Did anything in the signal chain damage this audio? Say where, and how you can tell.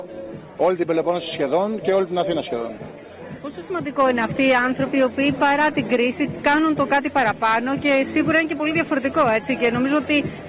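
No, nothing damaged this audio.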